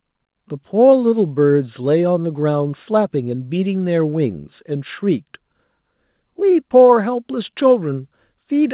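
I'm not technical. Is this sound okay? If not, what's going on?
Yes, it's fine: this speech came through an ordinary call connection, which trims everything above about 4 kHz and gives it that familiar phone-line sound, and nothing in it has gone wrong.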